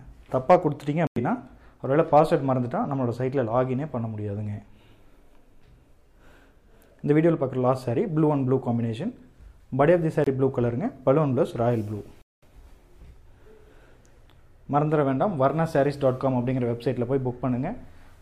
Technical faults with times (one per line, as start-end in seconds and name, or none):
1.07-1.18 Bluetooth dropout
10.24-10.28 Bluetooth dropout
12.22-12.44 Bluetooth dropout